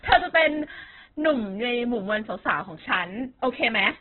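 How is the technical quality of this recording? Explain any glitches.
The technical quality is poor, with heavy compression damage throughout. The sound is rough, grainy and dull, and nothing survives above 4.2 kHz. This is likely Opus compression at a very low bitrate, consistent with about 8 kbps in its music mode. Starved bands get filled with folded or noise content, so the speech turns rough and grainy. A spectrogram would show a hard ceiling near 4.2 kHz and smeared, noisy bands below it.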